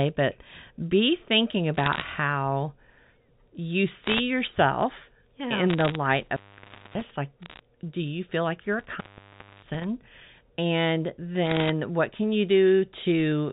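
Bursts of bit errors on a digital phone line hit at 1.75–2.02 s and 4.04–4.20 s and again at 5.70–5.96 s: flipped bits in single samples give sharp ticks over intact speech. An intermittent contact then opens at 6.21–7.11 s for 0.59 s, and at 8.79–9.84 s for 0.62 s, cutting the sound out with crackle at each edge. Tick bursts return at 7.42–7.60 s and 11.47–11.69 s.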